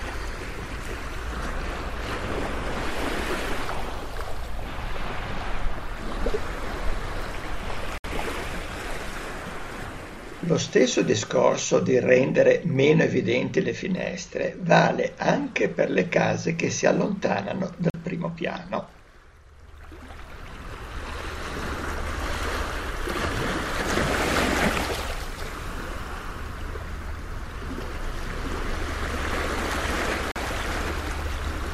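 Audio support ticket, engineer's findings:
Short holes at 7.98 s (64 ms), 17.90 s (43 ms) and 30.32 s (43 ms). Block of digital silence. Output buffer not filled in time, so samples zeroed. The 43 ms gaps fit a 2048-sample buffer at 48 kHz.

From 27.66 s to the end, a second full-band copy trails by roughly 0.7 s at about 5 dB down, dry and starting abruptly. Doubled audio track, likely a slower second capture path mixed back in.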